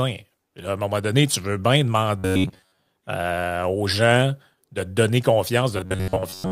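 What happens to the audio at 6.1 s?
From 5.77 to 6.52 s, just after "gens de te donner", the speech becomes robotic sound from repeated short buffers, a rigid 94 Hz buzz, likely from roughly 11 ms segments looping over most of the span.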